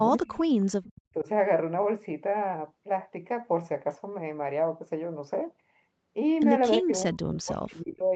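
Right from the start, 0.0 to 0.45 s, the speech dips by about 20 dB in patches adding up to roughly a third of a second. That's most likely speech suppressed in double talk: both ends talking at once, and the echo canceller, unable to separate its own talker from loudspeaker echo, pulls everything down together.

At 0.85 to 1.01 s there's a brief echo leak: a faint copy of the voice, about 25 dB down, trailing the original by 326 ms. The likely cause is a speakerphone whose canceller didn't scrub out everything its mic caught, so a scrap got sent back.

Right after, 1.02 to 1.28 s, the suppression returns much harder, with drops of about 40 dB that nearly cut the sound out. Then from 6.81 to 8.12 s it hits again, about 35 dB deep, chopping around a second of audio into pieces.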